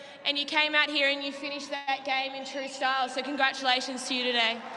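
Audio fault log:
1.75 to 1.89 s: call audio freeze, the last sound stretched into a fading buzz for about 0.12 s, likely from delayed packets draining the jitter buffer; audio then resumes intact.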